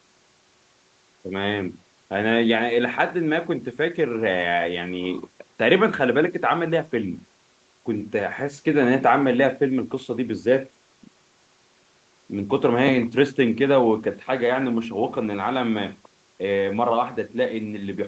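No technical faults occur in this speech; the absence of anything above 8 kHz comes from the call path's normal band limit, not from a fault.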